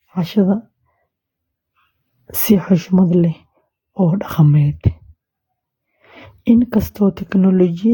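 Throughout, generation loss: the speech was likely re-encoded around ten times through a lossy codec, so it sounds swirly, hollow and smeared, with blurred attacks.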